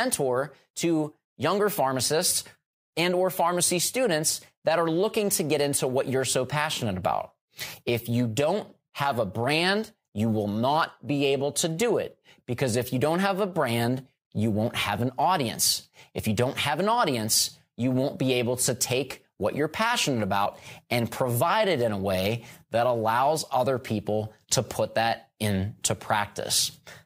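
At 20.45 s, compressed frames are skipped. About two frames, roughly 50 ms of speech, never play. The speech jumps ahead at the join.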